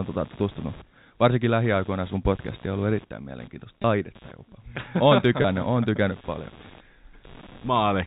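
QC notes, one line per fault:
throughout: computer activity noise. A buzzy, chirping rasp of pulses around 150 Hz sits roughly 25 dB under the speech and rises and falls with the machine's workload, not the talker, because processor and graphics current surges shift the audio circuit's shared ground.
3.82–3.84 s and 5.42–5.44 s: packet loss with pitch repetition. Each brief spot sounds like a slightly held, buzzy sustain lasting 20 ms. That fits a single lost packet that the receiver bridged by repeating the last pitch period, heard through the narrowband G.711 telephone channel.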